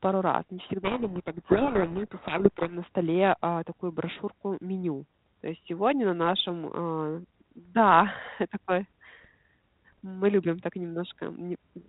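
From 0.84 to 2.74 s, right after "раз не" and until "на столе э такую", a codec payload misread buries the speech in harsh, rasping distortion. The G.726 code words seem to be read with their bit order reversed, so each decoded difference is wrong. On a spectrogram this shows as dense broadband noise filling everything up to the 4 kHz ceiling of the 32 kbit/s G.726 path, with the speech harmonics barely visible. In the waveform it looks like a jagged, noise-like envelope.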